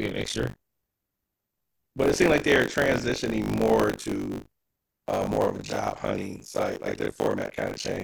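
Buffer tearing runs through the whole of this speech clip, heard as a robotic 50 Hz rattle under the speech. The writing side and the playback side of a ring buffer have slipped, so within each 20 ms period roughly a third of the audio repeats material from about 40 ms earlier, hard-joined at both edges.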